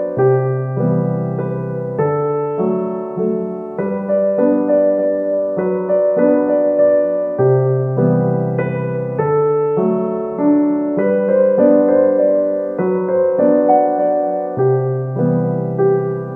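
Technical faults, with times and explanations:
No technical faults can be heard anywhere in the clip, and the signal stays intact throughout.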